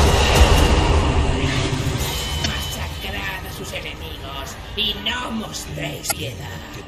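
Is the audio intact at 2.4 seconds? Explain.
No. Damaged data in a compressed stream breaks the audio from 2.42 to 2.46 s. Part of the encoded stream is corrupt there, so the decoder misreads or discards those frames, loses its place and hunts for the next valid frame header before resuming. The result is a short chirp or blip about 40 ms long.

This damage sits on top of MP3 compression that is plainly audible across the whole clip, including this moment. Weak frequency components flicker in and out from one frame to the next. That gives a watery, swirling texture, metallic chirps on bright or hissy sounds, and smeared attacks. The plainly audible degradation points to a low bitrate, most likely around 64 kbps, that left the encoder short of bits.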